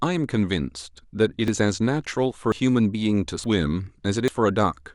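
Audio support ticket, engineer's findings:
Capture side likely not draining its buffer before the hardware overwrote it: dropped buffer (overrun). Speech skips ahead with no gap at 1.48 s (about 40 ms lost), then 2.52, 3.44 and 4.28 s (about 70 ms each).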